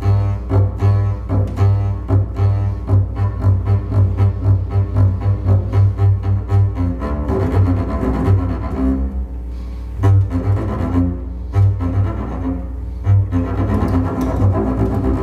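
A steady mains hum at 60 Hz runs under the audio for its whole length, loud enough to sit only about 10 dB below the wanted signal. A ground loop or a nearby transformer has coupled the power line into the signal path. Unlike wind or handling rumble, which swells and fades with movement, this tone never changes pitch or level, and its fixed 60 Hz fundamental with low harmonics sets it apart from broadband traffic or HVAC noise.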